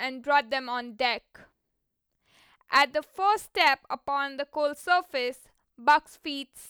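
At 2.76 to 2.82 s, 3.61 to 3.68 s and 5.89 to 5.95 s the speech hits hard clipping: peaks overshoot the maximum level the chain can pass, by about 4, 3 and 2 dB, and are sliced flat. Each burst is heard as a brief crackle on the loud syllable. On a waveform the tops sit squared off, and a spectrogram shows vertical smears of harmonics reaching high above the speech band.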